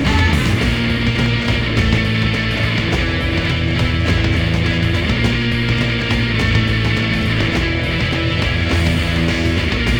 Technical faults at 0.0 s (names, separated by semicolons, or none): imaging from linear upsampling